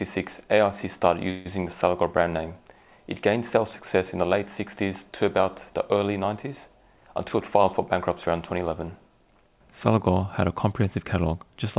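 From 1.30 to 1.47 s, a call audio freeze: packets were likely held up and the jitter buffer ran dry, so the receiver stretches the last sound into a 151 ms buzz or hiss before the audio resumes where it stopped. From 6.96 to 8.71 s, a jitter buffer speed-up: with excess audio queued, the receiver repeatedly trims pitch-period slices, about 150 ms in total, so the sound runs at 109% speed, hurried but unchanged in pitch. Throughout, the call path leaves nothing above 4 kHz, which fits G.711 A-law coding.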